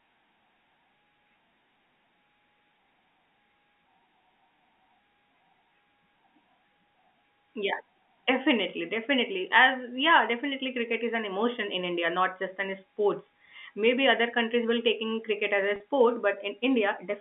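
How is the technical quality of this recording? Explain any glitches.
The recording has one glitch, a short dropout near the end of the telephone-band speech. It is carried by G.711 telephone coding, which holds the sound between roughly 200 Hz and 3.5 kHz.

At 15.76 to 15.80 s, packet loss with pitch repetition occurs. About 40 ms of audio failed to arrive, which fits two lost 20 ms packets. The receiver filled the hole by looping the last pitch period it had. Because the gap is so brief, this comes across as a slightly held, buzzy sound before the speech resumes.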